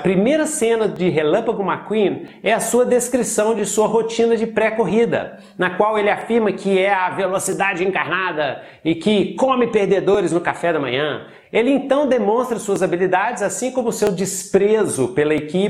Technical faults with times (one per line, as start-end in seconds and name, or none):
0.96-15.38 clock drift buffer slips